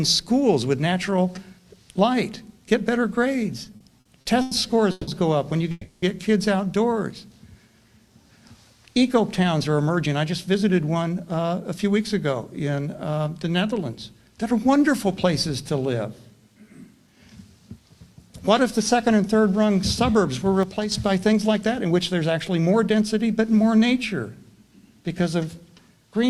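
From 3.65 to 4.53 s the sound hits repeated stalls, a stutter: seven short gaps, the longest 100 ms, where the receiver kept extending the last bit of sound because packets came in late and the jitter buffer kept running dry. About 260 ms gets filled that way, nearly a third of that stretch, so it drags and hiccups, though nothing's actually lost.

Right after come two call audio freezes, at 4.91 to 5.09 s and 5.71 to 6.04 s. The sound hangs as a fading buzz for 160 ms and then 310 ms, with a brief moment of silence at the end of each, and then picks up where it stopped. That's likely packets held up on the way, adding delay.

From 9.02 to 11.85 s there's a jitter buffer speed-up. The receiver trimmed tiny pitch-period slices to cut built-up delay, roughly a fifth of a second in all, so the audio runs about 8% fast at the same pitch and feels a bit rushed.

At 20.63 to 20.92 s one channel drops out, likely a lost stereo channel, and the mono level dips abruptly by about 6 dB.

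Then from 21.33 to 22.98 s there's another jitter buffer speed-up, about 7% fast, with roughly a tenth of a second removed.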